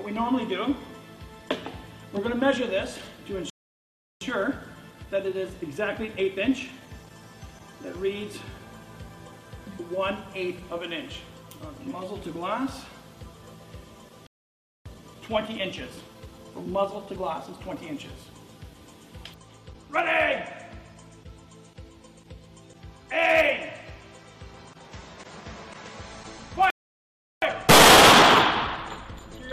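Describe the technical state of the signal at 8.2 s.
At 8.2 s the signal is intact, with no dropout, distortion, glitch or other fault to be heard at that point.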